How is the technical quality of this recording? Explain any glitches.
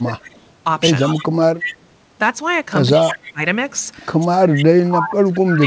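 The recording has three kinds of glitches: level drops during overlapping talk, returning echo, and one tiny dropout. All of it sits on a call path with nothing above 8 kHz, which fits a wideband codec such as G.722.

Speech suppressed in double talk: At 0.0–0.29 s, 2.96–3.40 s, and 4.21 s to the end, the voice sinks, by about 25, 20 and 30 dB at its deepest. The likely cause is an echo canceller that couldn't tell its own talker from loudspeaker echo, so it turned both down.

Echo leak: A delayed copy of the voice comes back 166 ms late at 0.33–0.40, 0.99–1.28, 1.56–1.86, 3.01–3.33 and 4.55–4.60 s. It sits about 40 dB under the speech in the first stretch, about 10 dB under at 1.56 s, and about 15 dB under elsewhere. It's likely loudspeaker pickup the canceller didn't fully remove.

Short concealed packet loss: At 0.87 s, about 10 ms of audio never arrived in time. The decoder covered 5 ms of it by extending the previous sound and then blending back, which leaves a quick smear rather than a clean gap.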